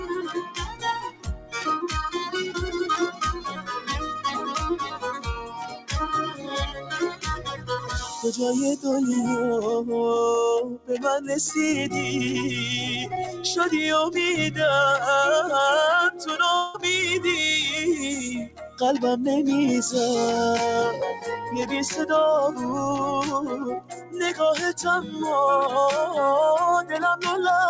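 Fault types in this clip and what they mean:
Noise suppressor applied to music or sounds: a speech-tuned suppressor stayed on, so held sounds and tails keep ducking by around 10 dB, which gives a pumping, thinned-out feel.
Sound cut by the noise suppressor: steady or fading stretches get pushed down hard, worst from the start to 1.61 s and near 10.7 s and 23.5 s, at about 16 to 17 dB.
Long network dropout: from 16.56 to 16.76 s about 180 ms of sound is replaced by a fading fill with no full silence, likely a network gap.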